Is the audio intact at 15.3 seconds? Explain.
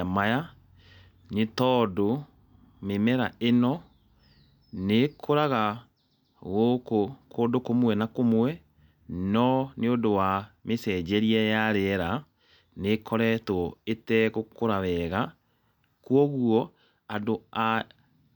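Yes, the speech at 15.3 seconds is intact, with no dropout, click, distortion or other fault at that moment.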